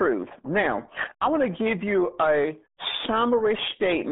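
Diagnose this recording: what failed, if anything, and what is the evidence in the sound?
Codec stage: the whole clip has that muffled, gargly RealAudio 14.4 codec sound, consistent with an 8 kbit/s stream. Nothing above 3.8 kHz gets through, so the speech sits in roughly a 200 Hz to 3.6 kHz band.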